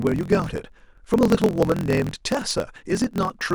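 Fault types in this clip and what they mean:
Block size mismatch (truncated): one stage hands over longer blocks of samples than the next stage reads, so the tail of every block is discarded. Throughout this speech, that shows as a steady buzz at about 43.1 Hz, which fits a 1024-sample read block, and as delivery running 1.12 times faster than normal. The timbre stays about normal, unlike a sample-rate error, where speeding up would raise the pitch.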